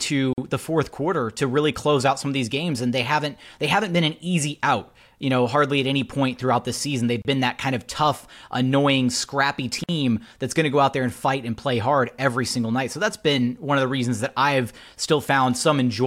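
Three short dropouts in the speech, at 0.33 s (just before "the fourth quarter to"), 7.22 s ("throughout the season they've" into "been that kind of"), and 9.84 s ("of tough annoying scrappy" into "that's going to go"). They're gaps at a join of encoded pieces, lasting about 47, 29 and 51 ms. Separately encoded chunks were butted together with their encoder delay and end padding left in, so you get a brief hole with smeared edges before the sound picks up exactly where it stopped.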